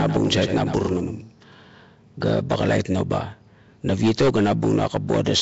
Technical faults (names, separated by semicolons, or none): Nellymoser compression; doubled audio track